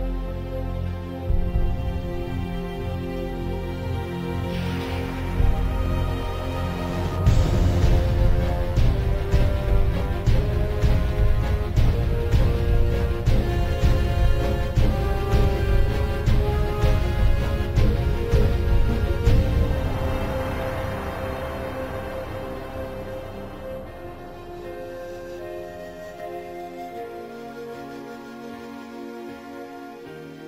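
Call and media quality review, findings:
No faults found on review. Nothing to escalate for this recording.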